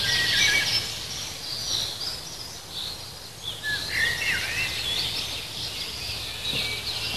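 Nothing here needs fixing; it's a short recording of sounds with no technical problems to report.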